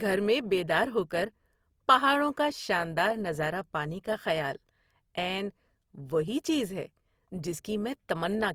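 Opus compression runs through the whole recording, plainly audible as a rough, grainy, noisy texture on the speech, with content extending to about 20.2 kHz. It is likely the codec's music mode at a rate fitting 24 kbps, filling starved bands with folded or noise-like energy.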